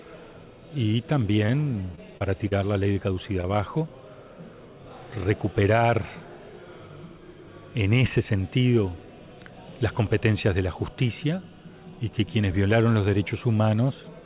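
A brief smear at 1.46 to 1.50 s is short concealed packet loss: about 20 ms of audio never arrived in time, and the receiver bridged the hole by extending the preceding sound before blending back into the real signal. The same brief smear or wobble returns at 2.93 to 2.97 s, 3.13 to 3.17 s and 3.41 to 3.45 s, each covering a similar 20 ms gap.

Between these, from 1.92 to 2.53 s, the sound turns choppy, with pieces missing. This is repeated packet loss: four separate gaps, the longest 30 ms, together about 60 ms missing. Each one was patched by continuing the last sound, and the next dropout followed too soon for the audio to settle, so about 15% of that stretch is concealment.

Throughout, nothing is heard above 4 kHz, which points to a G.711 mu-law call path at 64 kbps.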